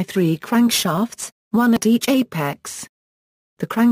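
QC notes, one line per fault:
0.98, 1.77 and 2.53 s: dropped buffer (overrun). The audio skips ahead at each point with no silence, losing roughly 40 ms at the first two and about 10 ms at the third. Likely the hardware overwrote samples before they were read, joining both sides directly.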